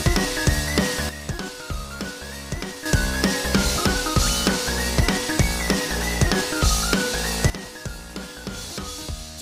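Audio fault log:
1.09–2.86 s and 7.50–9.42 s, sudden gain jump: the digital gain was likely switched from one sample to the next with no ramp, so the sound and its background noise drop together, by about 10 dB and then about 13 dB, in abrupt steps.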